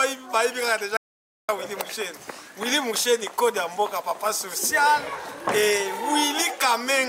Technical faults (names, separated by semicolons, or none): audio dropout to silence